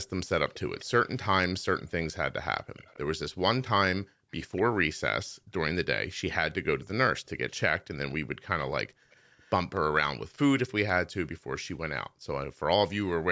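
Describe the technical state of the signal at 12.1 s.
At 12.1 s the speech is intact, with no fault in the signal beyond the ordinary band limit of call microphone processing, which leaves nothing above 8 kHz.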